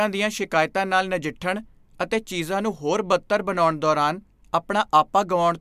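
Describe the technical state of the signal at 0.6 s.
At 0.6 s the audio is intact, with nothing faulty to be heard in the signal at that moment.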